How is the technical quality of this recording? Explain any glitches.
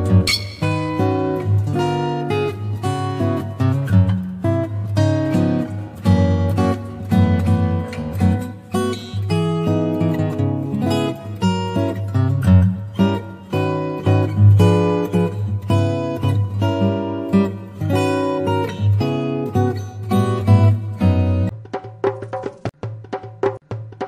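The recording has one technical fault, confined to its opening.

Periodic clock jitter runs from 0 to 7.75 s. Interference wobbles the converter's sampling clock at around 1 kHz, adding sidebands at that spacing on either side of every component, most strongly on high frequencies. The sound takes on a rough, metallic edge.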